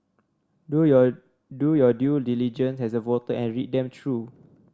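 No technical fault can be heard at any point in the speech recording.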